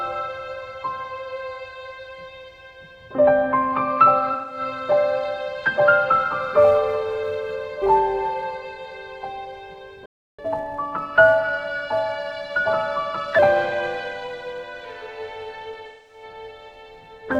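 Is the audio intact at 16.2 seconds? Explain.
No. From 6.12 s to the end, a filter restarted on every block begins each block from silence, producing a 345 Hz tick-buzz that fits a 128-sample block, visible as evenly spaced waveform spikes and a harmonic comb. Between 15.86 and 16.23 s, AAC frame loss with concealment replaces about 213 ms, which points to roughly five lost frames, with guessed spectra that sound smeared and noisy and look like a blurred spectrogram patch.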